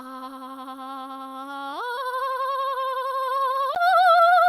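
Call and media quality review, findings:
Brief smear and wobble in the music at 1.95–1.99 s. Short concealed packet loss: about 20 ms of audio arrived too late for the decoder, the receiver extended the preceding sound for about 15 ms, then cross-faded back into the real signal.

Tick at 3.75 s. Block of digital silence: about 12 ms of output was zeroed, which fits a 512-sample buffer not filled in time by the playback path, with abrupt cuts at both edges.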